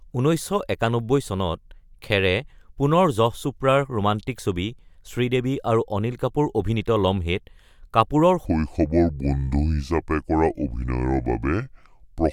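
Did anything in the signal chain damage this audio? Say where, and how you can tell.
Yes. From 8.46 s through the end at 12.32 s the speech suddenly drops into a section at the wrong speed, running at 0.69 times its proper rate. Pitch and tempo fall together, so the voice turns deep and dragging, roughly seven semitones down. That locked pairing points to resampling or a clock mismatch at the editing or playback stage, where that stretch was likely read at a rate different from the one it was recorded at.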